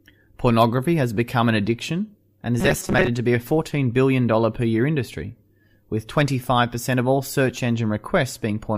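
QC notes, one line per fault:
2.60–3.08 s, robotic sound from repeated short buffers: speech becomes a rigid metallic buzz at 188 Hz, likely because late audio is filled by looping a 5.3 ms chunk over about half the span. A spectrogram shows flat harmonic lines spaced 188 Hz apart, and the waveform shows identical repeating cycles.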